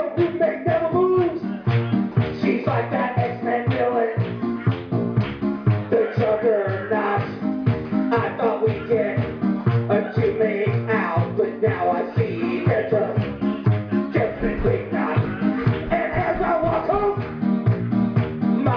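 No technical faults are audible.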